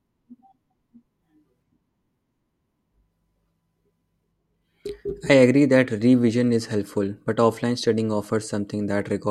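No technical faults are audible.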